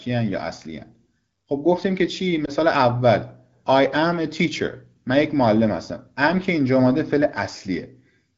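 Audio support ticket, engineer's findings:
Lost AMR speech frame at 2.45–2.50 s: brief dip or warble in the speech. Radio errors failed the frame checksum; the decoder replayed the last good parameters at reduced gain. Wideband AMR-WB (HD Voice) path audible, light coding texture only.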